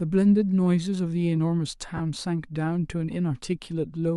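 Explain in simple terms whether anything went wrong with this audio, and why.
Yes, one thing went wrong. Between 1.97 and 2.01 seconds there is a short break in the speech, caused by lost LE Audio frames. The wireless Bluetooth link dropped about 30 milliseconds of sound, which fits three lost frames in a row. The receiver filled the hole by replaying the last bit of sound it had, with its detail scrambled. So for that instant the voice turns into a noisy smear.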